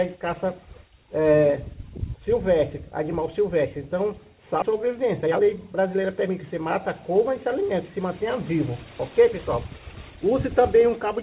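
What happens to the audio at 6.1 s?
That's jitter buffer speed-up, from 4.72 to 6.70 s: the receiver snips out short pitch-period chunks, about a third of a second total, so the sound runs at 113% without changing pitch.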